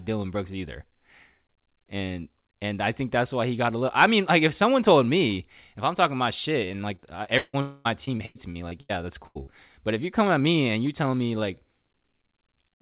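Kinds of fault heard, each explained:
Repeated packet loss (robotic sound): At 6.68 to 7.55 s, right after "I'm talking my shit", and again at 8.05 to 8.91 s, four and then six gaps, the longest 156 ms and 94 ms, are each patched by stretching the last sound, leaving choppy stretches with pieces missing.
Long network dropout: At 7.61 to 7.87 s, about 240 ms of the real audio never plays. A continued, fading buzz or hiss covers the whole hole without dropping to silence, and the sound resumes further on. The likely cause is a network dropout during which nothing arrived.
Burst of packet loss: At 9.27 to 9.37 s, about 80 ms of consecutive audio went missing. The receiver held the last sound and let it fade as a buzz or hiss, then picked up again later, so that piece is simply gone.
Short concealed packet loss: At 9.43 to 9.49 s, about 40 ms failed to reach the decoder in time. The gap was bridged by extending the preceding sound and blending back in, heard as a brief smear or wobble where a short sound may vanish.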